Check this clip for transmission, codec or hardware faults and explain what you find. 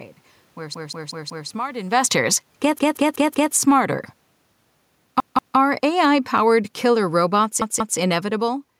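Two kinds of fault are present: four repeated-buffer stutters and an automatic gain level that keeps falling through most of the clip.

Repeated buffer occurs at 0.74–1.49 s, 2.79–3.53 s, 5.20–5.57 s and 7.62–7.99 s. When fresh audio failed to reach the output in time, the device replayed its last block: four extra times in the first two events, twice in the last two. Each repeat is about 186 ms, which fits an 8192-sample buffer, so it sounds like a rhythmic stutter with hard joins. Little or no audio appears to be lost.

Automatic gain falling runs from 1.79 s to the end. The gain control judged the input too loud or its background noise too strong and kept lowering its gain, so the speech and the room background sink together rather than the voice alone fading. This is separate from the talker's own level shift near 2.0 s, which comes from position at the microphone.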